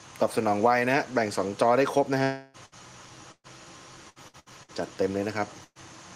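At 2.23 s the sound stops moving forward and the last fragment is stretched into a fading buzz or hiss that runs to 2.57 s, about 300 ms in all. It never drops to silence, and the sound resumes further along with that stretch gone. This is most likely a long network dropout, where nothing arrived for a third of a second and the receiver filled the hole by extending what it last had.

A burst of packet loss follows at 2.66 to 2.75 s. About 60 ms is missing and replaced by a short, decaying continuation of the preceding sound, heard as a brief smeared hold. A longer burst runs from 3.32 to 3.47 s. Here 120 ms is lost, and the concealment fades out completely, leaving roughly 50 ms of silence before the sound picks up past the missing part.

From 4.10 to 4.71 s there is repeated packet loss with a robotic sound. Four separate gaps, the longest 67 ms, are each patched by repeating the last sound, and the next gap arrives soon after. 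About 39 percent of that span is filler rather than real audio. The result is choppy, with pieces missing.

At 5.64 to 5.78 s another burst of packet loss drops 120 ms. The held, fading fill ends in about 40 ms of silence before the audio continues further on.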